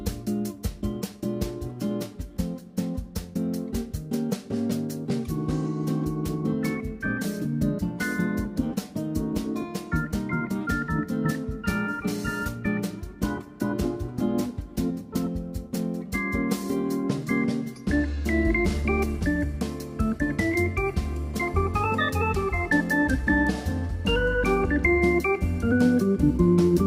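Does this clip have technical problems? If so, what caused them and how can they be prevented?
No, there are no technical problems in this clip. There is nothing to diagnose, so no cause or prevention applies.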